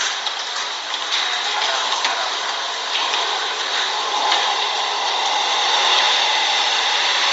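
Throughout, the sounds carry a grainy, breathy edge with nothing above 7.7 kHz, likely Bluetooth LC3 compression at a low bitrate, fitting 32 kbps.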